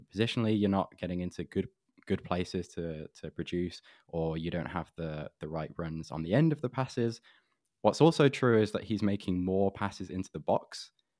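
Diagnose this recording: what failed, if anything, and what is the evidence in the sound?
Nothing failed: no stage of the chain leaves any audible mark on the speech, so there is no fault evidence to cite.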